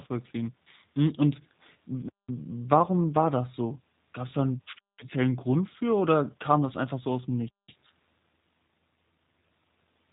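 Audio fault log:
Throughout, G.729 codec: the speech is rebuilt from a vocal-tract filter, a pitch predictor and a few pulses per frame. This leaves it clearly rough and synthetic, and nothing passes above 3.8 kHz. The sound fits an 8 kbit/s G.729A stream.
2.09–2.29 s, 4.79–4.99 s and 7.49–7.69 s, gap between chunks: the audio arrives in 2.5 s chunks with 200 ms of silence inserted at each join. Nothing is lost, but the speech is interrupted at regular intervals, leaving short holes.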